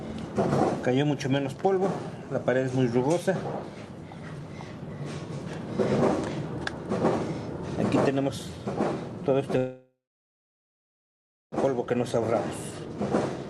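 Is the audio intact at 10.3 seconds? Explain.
No. From 9.57 to 11.54 s a call audio freeze fills the gap with a fading buzz, then about 1.6 s of silence. It was likely caused by delayed packets emptying the jitter buffer. The audio then resumes where it stopped, about 1.9 s late.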